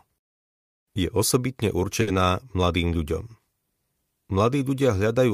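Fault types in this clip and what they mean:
Short stall from a late packet: around 2.01 to 2.23 s a packet turned up late, so the jitter buffer ran dry and the receiver held the last bit of sound for about 60 ms. Nothing's lost, but that sound drags with a faint buzzy dip before carrying on.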